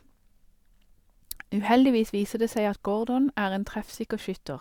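Speech recording; nothing technically wrong with it to report.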